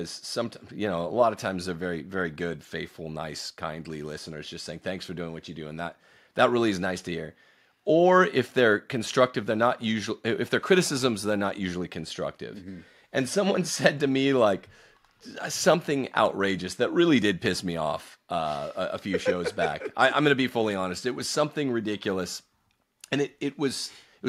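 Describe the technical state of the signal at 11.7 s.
At 11.7 s the signal is intact, with no audible fault at that moment.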